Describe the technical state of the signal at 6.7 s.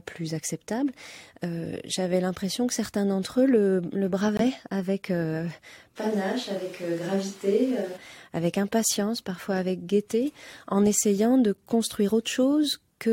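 At 6.7 s the speech sounds suddenly roomy and hollow, thinner in the bass, about 5 dB quieter and with more background noise, from 5.98 s, just before "avec impatience parfois avec", until 7.96 s. The likely cause is a switch to a distant microphone after the close one dropped out.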